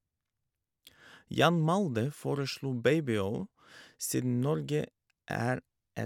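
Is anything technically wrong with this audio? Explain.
No, nothing technically wrong stands out here; it's a short bit of speech and it all comes across just as it should.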